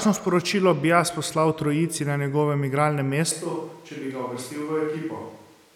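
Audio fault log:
3.32 s to end, switch to a distant microphone: the speech suddenly turns roomy and hollow, loses bass, and drops about 5 dB, while background noise rises to roughly 30 dB below the speech and stays there to the end. This is likely a change from a close microphone to one farther away. At that distance the room's reflections and ambient noise make up more of the signal, and the low-frequency boost of close miking is lost.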